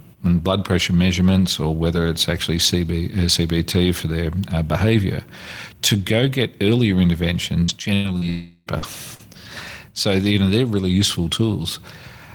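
From 7.63 to 9.21 s there is repeated packet loss, heard as robotic sound. Five gaps, the longest 100 ms, leave the speech choppy. About 17% of that span is concealed by stretching the preceding audio across each hole.

Inside that stretch, from 8.29 to 8.69 s, the audio turns into a smeared, fading continuation of the last sound for about 370 ms, ending in a brief 10 ms of silence before speech resumes with material missing. The likely cause is a long network dropout.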